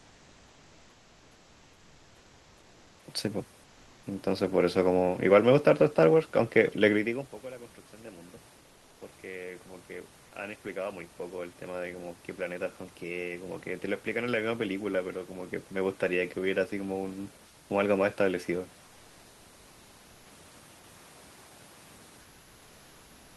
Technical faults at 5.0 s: none

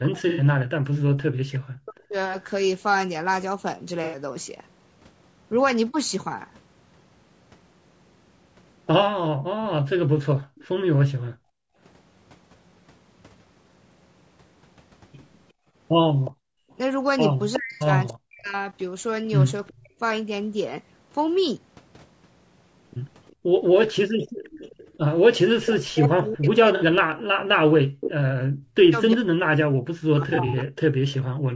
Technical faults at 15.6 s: low-delay AAC compression; background gated by the echo canceller

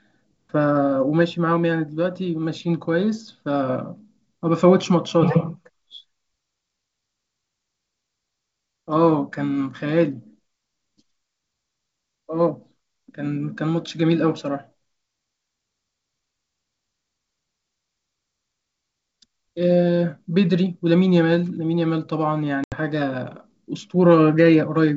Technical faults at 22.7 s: packet loss on an ADPCM call

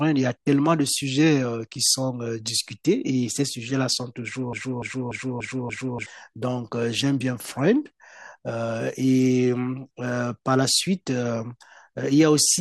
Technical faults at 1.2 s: none

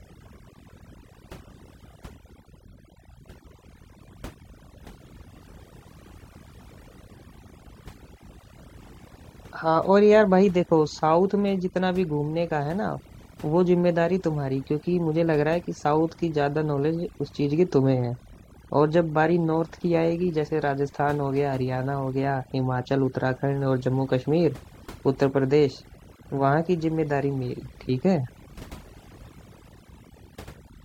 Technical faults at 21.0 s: overdone noise removal

